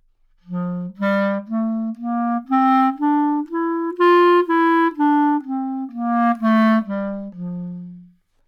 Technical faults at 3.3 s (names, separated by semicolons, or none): none